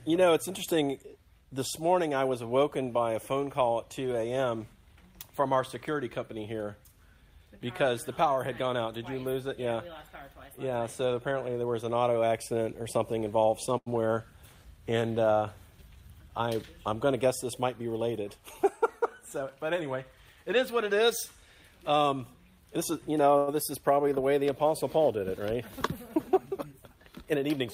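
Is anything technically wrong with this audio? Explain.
Yes. At 13.77–13.88 s and 23.38–23.49 s a sound hangs for about 90 ms and 100 ms with a faint buzz or dip. These are short stalls from a late packet: the jitter buffer ran dry, so the last sound was stretched until the packet arrived.

From 15.82 to 16.55 s and 27.26 to 27.67 s the audio hurries, at 111% and 108% speed, without any change in pitch. This is jitter buffer speed-up: excess buffered audio was trimmed by cutting out pitch-period slices, removing about a tenth of a second in the first passage and a few hundredths in the second.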